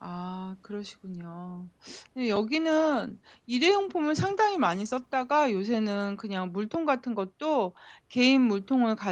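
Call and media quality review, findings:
Call bitrate drop, 2.16 to 5.49 s. Speech turns rough and watery. Probable component: Opus encoder, after the bandwidth estimate fell. Coarser coding fits a halving from 32 to 16 kbps, held 3.26 s, then recovers.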